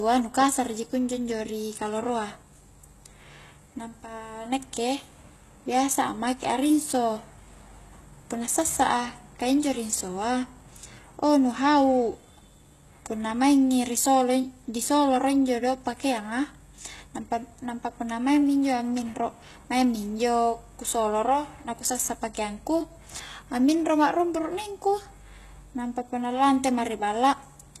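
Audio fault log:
Throughout: HE-AAC compression, plainly audible. The speech points to HE-AAC at a very low bitrate, likely near 16 kbps. The treble is rebuilt from copied lower bands, so harmonics do not line up and s sounds turn gritty and lispy, with nothing above 12.3 kHz.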